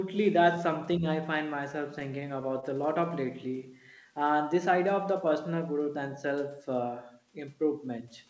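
From 1.56 to 2.64 s there are scattered short gaps. Around seven packets went missing or arrived late. The receiver filled each hole by extending the preceding sound. The patches total roughly 70 ms, none longer than about 20 ms. They come through as brief ticks and smears in the speech.

From 3.47 to 3.95 s comes a jitter buffer slow-down. The buffer was short of reserve, so it repeated single pitch periods to stretch time. This adds 41 ms and plays the speech at 93% speed. Sounds drag slightly, with unchanged pitch. The whole clip is band-limited, with nothing above 8 kHz, as expected from a wideband call codec.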